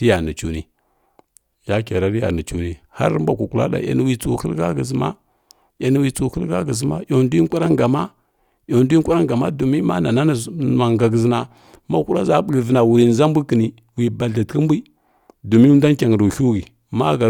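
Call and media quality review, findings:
No audible faults found in the speech; no dropouts, level problems or processing defects to log against any component.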